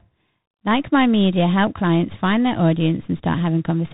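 From start to finish the speech carries tandem speech coding: it sounds like two speech coders in a row, each re-encoding what the previous one had already degraded. The result is a rough, noisy quality, consistent with a CVSD stage followed by a G.711 mu-law hop and then a 32 kbit/s G.726 ADPCM coder. The errors compound at each pass, and nothing is left above 3.8 kHz.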